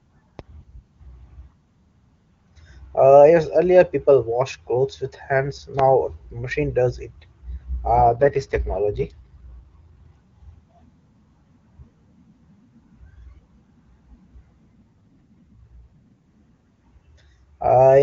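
Right at the start, from 0.39 to 0.41 s, there's a loud pop: one sharp click about 10 dB above the speech, which keeps going underneath. That's most likely a voltage spike from a plug, a switch or static getting into the chain.

Then come two AMR rate drops, at 7.96 to 10.12 s and 14.75 to 16.13 s. Nothing cuts out or gets duller, but the speech turns rough and synthetic. That fits the AMR-WB link stepping down from 23.85 to 8.85 kbit/s to spend bits on error protection, then returning to the clean HD Voice sound.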